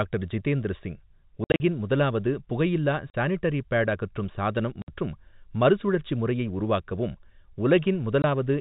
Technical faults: packet loss filled with silence

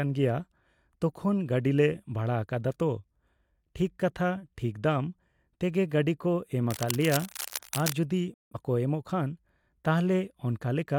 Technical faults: cable scratch noise; digital broadcast dropout

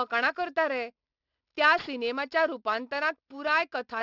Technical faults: aliasing

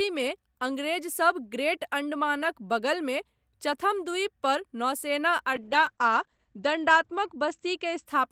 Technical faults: call bitrate drop

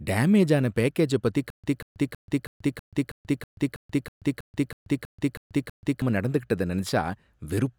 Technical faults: stutter with silent gaps

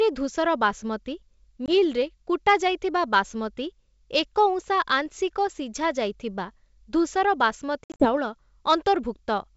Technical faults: packet loss on an ADPCM call

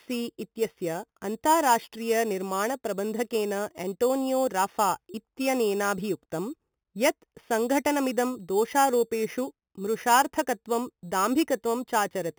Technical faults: imaging from sample-and-hold upsampling

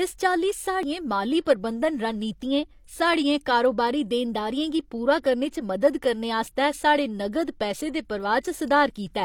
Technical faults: damaged data in a compressed stream

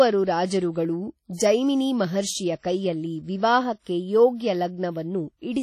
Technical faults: WMA compression

